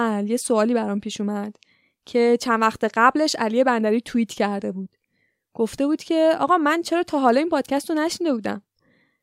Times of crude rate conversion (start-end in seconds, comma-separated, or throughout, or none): none